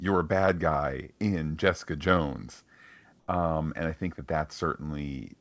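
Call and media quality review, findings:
Comfort noise in place of the background, 3.20–3.28 s, right before "um and I think": the real background drops for 80 ms and becomes flat, featureless hiss about 4 dB quieter. Likely sender DTX gating, with the receiver synthesising fill noise.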